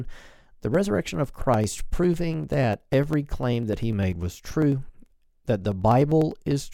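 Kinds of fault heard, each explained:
Periodic USB or driver dropouts: a blocked bus or driver skips roughly half a millisecond every 0.1 s. This causes steady ticks from 0.05 to 6.61 s.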